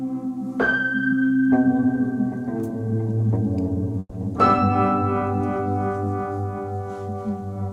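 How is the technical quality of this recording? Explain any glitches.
One glitch stands out in the music, a call audio freeze between 3.99 and 4.14 s. For about 0.15 s the music stops moving forward. The last sound is stretched into a fading buzz or hiss that lasts roughly 130 ms and ends in a short silence of about 30 ms. The likely cause is packets held up in transit, which left the jitter buffer empty. When the music resumes, it continues from where it stopped rather than skipping ahead. Nothing is lost, but everything afterwards runs about 130 ms later.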